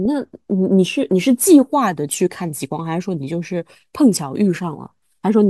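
There are no technical faults to describe at any point in the speech.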